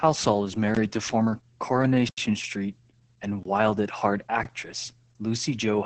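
It's a speech clip, and the whole thing has heavy Opus voice compression damage. It's running in the SILK speech coder at what sounds like about 10 kbps, and the band is cut down to wideband. The excitation is coded so coarsely that the voice comes out muffled, hoarse and a bit robotic. There's also a block of digital silence from 2.08 to 2.18 s, a hole of about 93 ms where the sound cuts out and back with no fade. That length fits a 4096-sample buffer being dropped, the kind of gap you get when the output buffer isn't filled in time.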